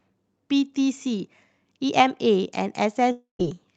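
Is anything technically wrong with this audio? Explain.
Yes. From 3.11 to 3.41 s there's a long network dropout, likely: audio stopped arriving, the receiver stretched the last sound into a fading buzz, then silence, and the lost stretch never returns.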